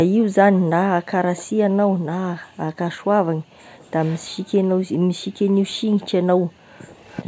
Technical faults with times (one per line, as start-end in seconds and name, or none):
0.09-0.71 background gated by the echo canceller
1.36-1.45 echo leak
1.47-3.91 background gated by the echo canceller
4.00-4.24 echo leak
4.35-7.03 background gated by the echo canceller
7.09-7.22 echo leak